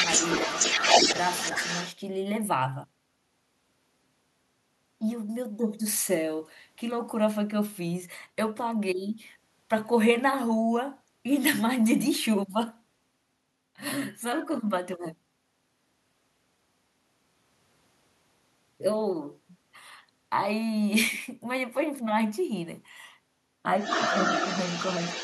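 A speech clip in which the echo canceller on the talker's device likely failed to fully remove the far end's audio picked up from its own loudspeaker, so the other side's voice leaks through at two points. From 0.00 to 1.94 s that second voice is a little louder than the main talker, and from 23.8 s to the end at 25.2 s it sits at about the same level, competing directly with the talker.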